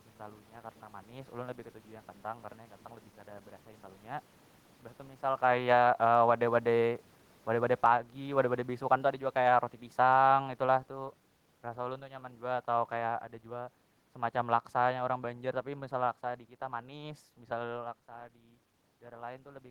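Right after "mbah tu misal", at 5.37 s, the automatic gain control pulls the level down by about 4 dB until 6.03 s. From 5.72 to 6.58 s it has an overlapping automatic gain rise of about 4 dB. Voice and room noise dip and swell together, around the time the talker shifts near 5.5 s.

From 7.69 to 17.85 s a long automatic gain fall drops everything by about 12 dB, with the room noise sinking along with the speech. Brief rises interrupt it, about 5 dB at 7.91 to 8.31 s and about 6 dB at 10.23 to 10.71 s, so the level pumps up before sliding on down.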